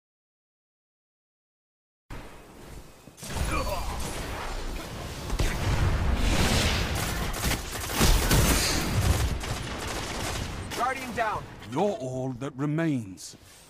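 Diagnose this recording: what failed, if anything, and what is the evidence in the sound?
Audio dropout to silence from the start to 2.1 s, likely a lost input link: silence, a flat waveform line and an empty spectrogram, with no room tone before sound begins.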